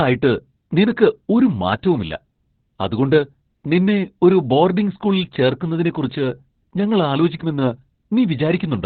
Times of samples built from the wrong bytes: none

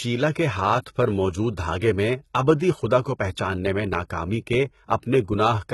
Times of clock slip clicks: none

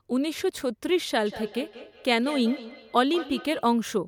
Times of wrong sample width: none

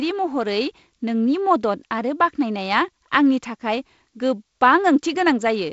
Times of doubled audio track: none

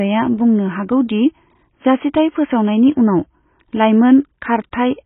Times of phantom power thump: none

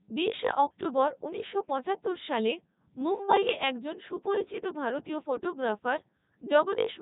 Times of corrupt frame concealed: none

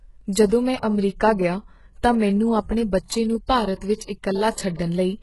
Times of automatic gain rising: none

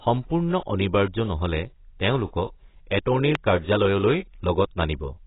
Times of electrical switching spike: 3.35

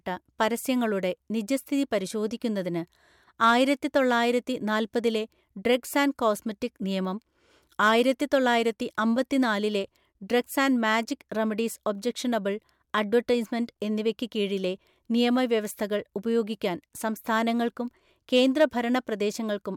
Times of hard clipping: 3.44-3.98, 7.83-8.54, 18.35-18.65

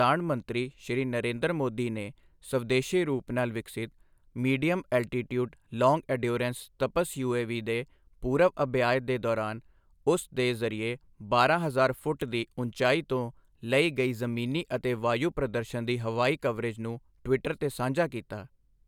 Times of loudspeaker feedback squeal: none

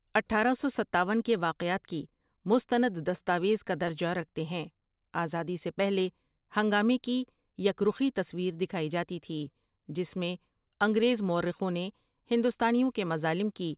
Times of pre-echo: none

